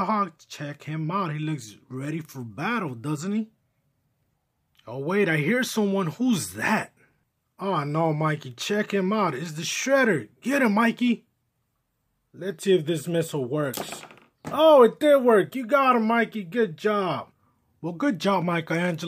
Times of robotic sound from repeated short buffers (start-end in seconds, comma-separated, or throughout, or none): none